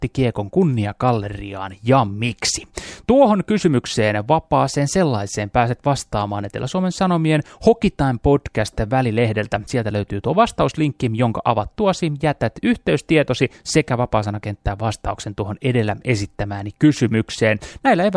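Nothing in the recording trips a fault here, so there's nothing to pin to a time or trace back to a cause.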